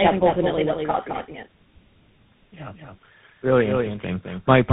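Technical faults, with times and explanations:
Throughout, doubled audio track: a second, full-band copy of the speech runs about a fifth of a second behind the original and only a few decibels quieter, so every syllable is followed by a clean, dry repeat with no decay or room colour. The likely cause is the same signal reaching the mix twice, once directly and once through a slower path, leaving the two copies fixed out of step.
Throughout, tandem speech coding: the speech is rough, muffled and warbly, with nothing above 3.8 kHz. The damage is heavier than any single narrowband coder would leave, and the texture points to three speech codecs in a row, with GSM full-rate stages and a final CVSD stage. Each coder re-encodes the previous one's already degraded output, so quantisation noise and smearing stack up at every border.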